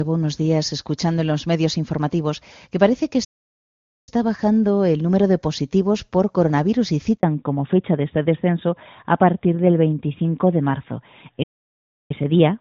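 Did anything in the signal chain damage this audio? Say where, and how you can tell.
Yes. At the playback stage, the output likely ran dry because the player was starved of data or its thread was blocked. The speech stops dead after "informativos que parece que" from 3.24 to 4.09 s (about 0.83 s) and resumes at "bajando el número de". A second stall of about 0.67 s runs from 11.43 to 12.11 s.

At the network stage, a handover gap follows "positivos por coronavirus y" at 7.17 s. The call was switched between networks and no speech frames arrived for 60 ms, so the voice cuts out briefly and whatever fell inside that window is gone.

At the codec stage, right after that handover, the call falls back to narrowband. It drops from AMR-WB at 23.85 kbit/s, which is clear up to that point, to AMR-NB at 12.2 kbit/s. From 7.23 s to the end, nothing reaches above 4 kHz, and the voice turns duller and rougher.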